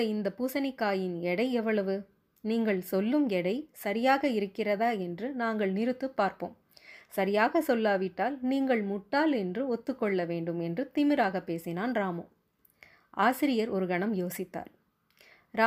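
No technical faults can be heard at any point in the recording, so there is nothing to describe in time order.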